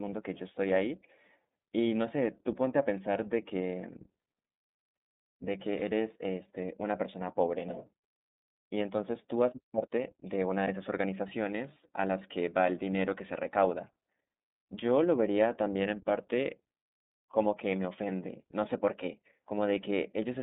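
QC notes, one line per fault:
Throughout, iLBC codec: the speech passed through a narrowband VoIP codec coding each 30 ms frame's excitation on its own, which fits a rate near 13.33 kbps. Only about 200 Hz to 3.7 kHz survives, so the speech sounds muffled, and plainly audible coding damage leaves it rough and synthetic.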